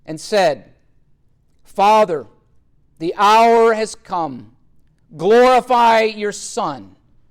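No technical faults can be heard anywhere in this audio.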